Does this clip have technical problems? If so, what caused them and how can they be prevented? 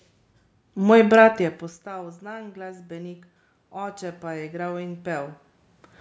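Yes. Automatic gain rising from 1.83 to 5.95 s, after "brat je": the level fell about 22 dB, so gain climbed about 8 dB, swelling room noise with the voice, unlike a talker moving. Keeping a steady mouth-to-microphone distance, or fixing the gain manually, prevents it.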